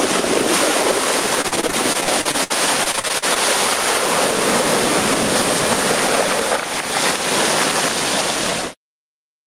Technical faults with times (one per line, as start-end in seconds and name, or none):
0.00-9.46 gain pumping
1.41-3.37 repeated packet loss (robotic sound)